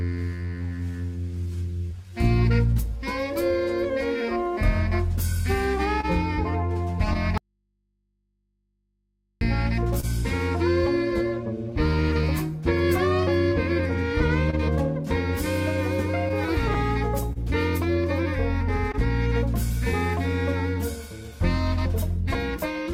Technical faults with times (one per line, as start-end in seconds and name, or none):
0.00-22.93 clock drift between sender and receiver
0.38-22.60 repeated timing corrections
6.01-6.05 short stall from a late packet
7.38-9.41 audio dropout to a faint residue
10.00-10.05 short stall from a late packet
14.50-20.19 scattered short gaps